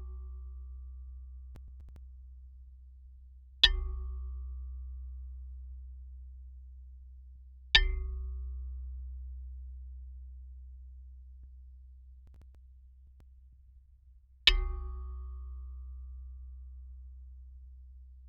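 From 1.55 to 1.96 s, and again from 12.27 to 13.20 s, processor overload crackle breaks up the audio. The processor fell behind on buffers of around 10 ms, and several were skipped outright, so each burst is gritty tearing made of hard-edged dropouts. On a waveform these are short flat gaps with abrupt edges. On a spectrogram they are thin vertical broadband streaks clustered within each burst.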